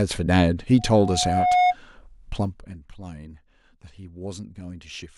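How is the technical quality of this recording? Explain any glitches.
The recording has two clear technical faults in the first part of the speech.

From 0.78 to 1.76 s a single, piercing tone at 724 Hz swells over roughly 0.7 s until it sits a few decibels above the speech. This is loudspeaker feedback squeal: the microphone was hearing its own loudspeaker, and at that one frequency the loop kept amplifying itself.

Between 2.33 and 2.80 s the speech drops by roughly 15 dB, and a fast ticking, zipping texture rides on it, around fifty small clicks per second. This is zipper noise. The gain was lowered in unsmoothed 1 dB jumps, and each jump leaves a tiny discontinuity in the waveform.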